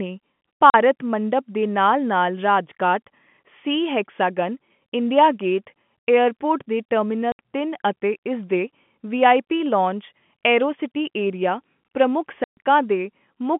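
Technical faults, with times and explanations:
0.70–0.74 s, 7.32–7.39 s and 12.44–12.57 s: packet loss filled with silence. Gaps of 40, 70 and 130 ms, before "ਮੰਡਪਮ ਦੇ" and "ਤਿੰਨ ਅਤੇ ਇਸ", were replaced by silence. The lengths fit 10 ms packets, and the edges are abrupt.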